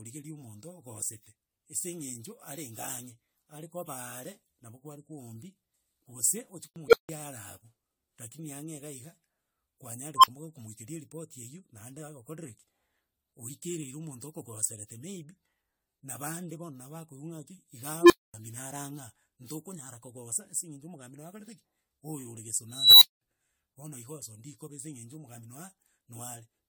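Repeated lossy coding, likely around ten passes through AAC-LC at 96 kbit/s, runs through the whole of this speech clip. Each generation re-quantises on a shifted frame grid, so the damage compounds: the audio sounds swirly, hollow and smeared, with blurred consonant attacks, well beyond what a single 96 kbit/s encode would produce. A block of digital silence appears from 6.68 to 6.76 s. For 80 ms the output buffer was left as zeros, presumably because it was not filled in time, and the sound drops abruptly to nothing and returns with no fade, leaving a short hole. An unstable filter fails four times. A recursive filter with bad coefficients sends its output growing without bound, so a tone swells, clips and cuts to silence until the filter resets. At 6.88 s a tone near 500 Hz builds over 49 ms and is followed by 160 ms of silence. At 10.16 s a tone near 1 kHz builds over 75 ms, then 40 ms of silence. 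At 18.01 s a tone near 400 Hz builds over 89 ms, then 240 ms of silence. At 22.70 s a squeal near 4 kHz builds over 317 ms, then 200 ms of silence.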